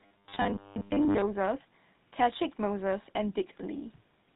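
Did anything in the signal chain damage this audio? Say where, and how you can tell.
Yes, two things. Right at the start, from 0.01 to 1.23 s, you get robotic sound from repeated short buffers. The speech collapses into a stiff metallic buzz pitched at 100 Hz, still loosely tracking the syllables. That pitch fits a 10 ms chunk being looped, so the likely cause is the driver or buffer stage starving and replaying its last block. Most of that stretch sounds like repeats rather than fresh audio.

The second one runs through the whole clip, and it's the GSM full-rate codec at the codec stage. The damage is plainly audible. There's a gravelly, buzzy roughness on the voice and nothing above 4 kHz. The codec rebuilds the voice from a vocal-tract model driven by a thinned-out pulse train, which gives it that grainy texture, and the character fits the 13 kbps GSM full-rate codec.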